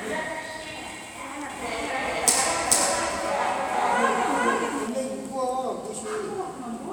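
A second copy of the audio was likely mixed back in alongside the first, arriving through a slower capture path or left out of step by an edit, so this recording of sounds carries a doubled audio track from 1.50 s to 4.88 s. The copy trails the original by roughly 0.4 s at about the same loudness, full-band and with no decay or room colour, so every event is heard twice. The repeat appears and vanishes abruptly at both edges.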